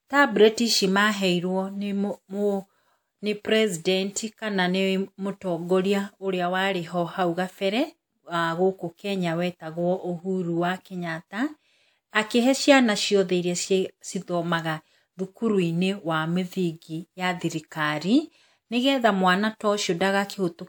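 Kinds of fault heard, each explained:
Pre-echo: A transform codec shares its quantisation noise evenly across a whole block. When a sudden attack sits late in that block, noise sized for the loud part spills into the quiet just before it. In this speech clip it happens once, from 12.10 to 12.13 s. A short hiss lasting 32 ms runs ahead of the attack. The onset loses its crispness and sounds smeared.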